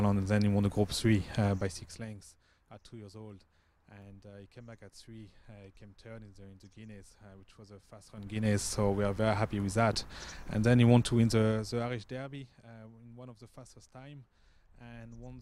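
Zipper noise runs from 1.49 to 2.32 s, as the level drops about 20 dB in 2 dB steps rather than a continuous ramp. Each jump lands abruptly on the waveform, so roughly ten small clicks a second ride on the sound, heard as a fine ticking for the length of the fade. It returns from 7.99 to 8.55 s as the level climbs about 20 dB, this time in coarser 4 dB steps, so the same ten-per-second zipping is louder and more pronounced.

A block of digital silence sits at 4.02 s, a gap of only 0.5 ms where the sound cuts out and returns with no fade. The hole itself is far too brief to hear as silence. It comes across as a tick or dip.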